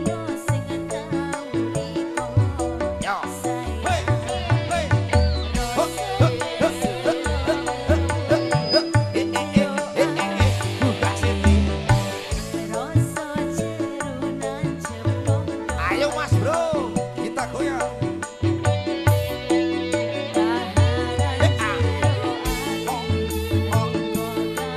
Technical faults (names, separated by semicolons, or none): none